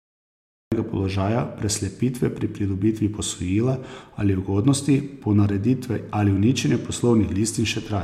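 A cut-off start leaves digital silence until 0.72 s, then speech begins abruptly mid-sound at "položaja preslepitve pri pridobitvi", showing a flat waveform jumping straight into the sound with no fade-in.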